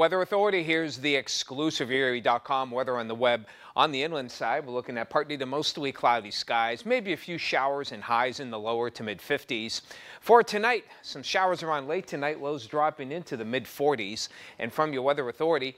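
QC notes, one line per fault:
No faults found on this clip; nothing to log.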